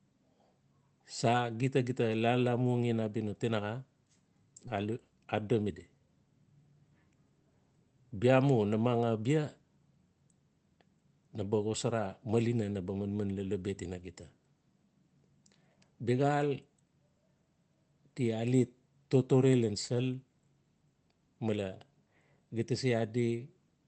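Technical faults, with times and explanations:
4.67–4.69 s, skip ahead: The speech jumps forward with no filler at the join, and roughly 0.7 s of it never plays. A stretch was dropped, either on the way or by the overflowing jitter buffer, and playback resumed from later material, which also cut the listening delay by about the same amount. The two sides of the gap meet almost directly, so a chunk of the utterance simply vanishes mid-flow rather than leaving a silence.
4.77–6.08 s, jitter buffer speed-up: Right after the skip, the speech runs at about 113% of normal speed while its pitch stays the same, giving a hurried, slightly clipped delivery for just over a second. The receiver was still holding more audio than its target, so it repeatedly trimmed tiny pieces a pitch period or so long, around a fifth of a second in total, to shrink the backlog. The Opus call path's 8 kHz band limit can be heard across this passage.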